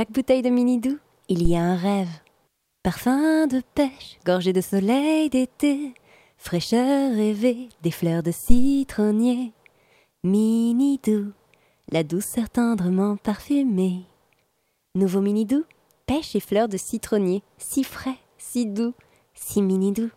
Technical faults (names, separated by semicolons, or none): phantom power thump